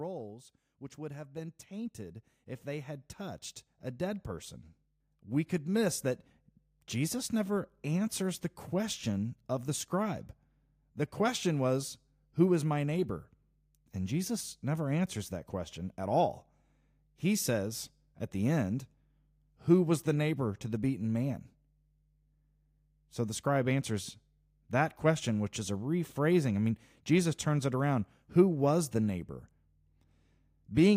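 A speech recording carrying a steady mains hum for its whole length, a low, unwavering tone at 50 Hz, with some of its low harmonics, sitting roughly 30 dB below the speech. It points to a ground loop or a nearby transformer leaking the power supply into the signal path. Unlike low-frequency rumble from handling or wind, it holds one fixed pitch and level regardless of what else happens. There is also automatic gain rising from 0.95 s to 16.07 s. Over those fifteen seconds the level climbs by 16 dB as the gain control, judging the input too quiet, slowly turns itself up. What separates this from a talker moving closer or raising their voice is that the background swells in step with the speech rather than the voice alone getting louder.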